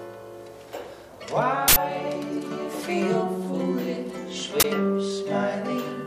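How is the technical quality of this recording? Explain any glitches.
Two glitches stand out, both the same kind: an uninitialised buffer. The first runs from 1.68 to 1.76 s, an 80 ms block, and the second from 4.6 to 4.64 s, a 40 ms block. Each time, a buffer got played before any real audio was written into it, so whatever leftover memory sat there was read out as samples. You hear it as a sudden burst of junk cutting into the sound for the length of that block.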